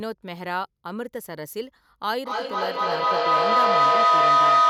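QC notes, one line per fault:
2.18–4.70 s feedback howl: the microphone-to-loudspeaker loop gains level each pass, narrowing to a tone near 1.5 kHz, repeating roughly every 200 ms, about 12 dB above speech.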